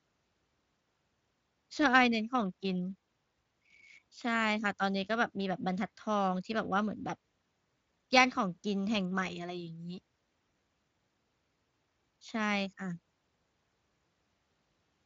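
Speech carried over a Speex voice link, with no technical faults to report.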